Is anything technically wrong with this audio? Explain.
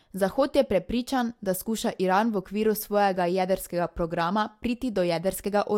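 No, there is nothing technically wrong with this speech recording. Listening through it, no fault of any kind can be heard at any point.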